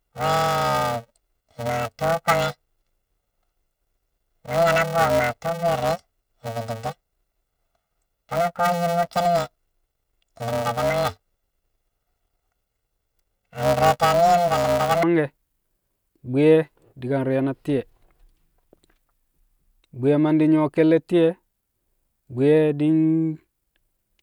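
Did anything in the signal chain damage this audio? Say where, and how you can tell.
Yes. From 0.0 to 15.03 s the speech carries a robotic buzz near 345 Hz with no clear octave shift, which points to planar audio read as interleaved at the sample-format conversion stage. Blocks of roughly 2.9 ms, which fits 128-sample blocks, each play left-then-right at double speed.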